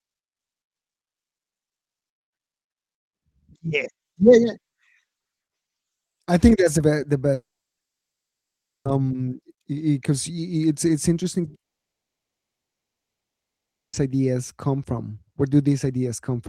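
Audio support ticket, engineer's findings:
Speech cuts out 7.33–8.87 s: brief fading buzz or hiss, then about 1.4 s silence. Again 11.59–13.95 s, fully silent. Speech resumes further on, lost audio never replayed. Likely long network dropout: no packets arrived; receiver concealment faded to silence.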